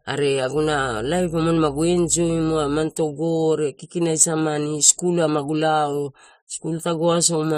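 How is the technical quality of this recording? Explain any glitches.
The recording has one clear fault: mains hum near the start of the speech.

From 0.54 s to 2.86 s, a steady low tone sits under the speech. It is mains hum at 60 Hz. Power-line energy has leaked into the signal path, most plausibly through a ground loop or a nearby transformer. The tone is well below the speech, about 20 dB down. It buzzes at a fixed pitch, then stops.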